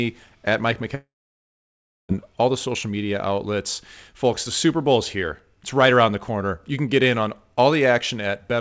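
Speech in which, from 0.95 s to 2.12 s, the sound smears into a short fading buzz and then drops to near silence for about a second before resuming at "all the social media". This is likely a long network dropout: packets stopped arriving, the receiver briefly extended the last sound, then gave up, and roughly 1.1 s of audio was lost outright. The clip has nothing above 8 kHz, which fits a G.722 call path.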